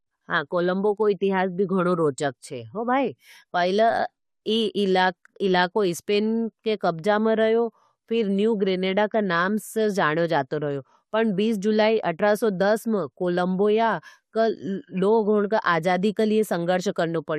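No technical faults can be heard anywhere in the recording; the speech signal runs without any audible disturbance.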